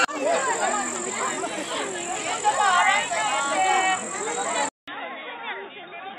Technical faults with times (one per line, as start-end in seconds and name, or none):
4.69-6.18 input switched to a poorer device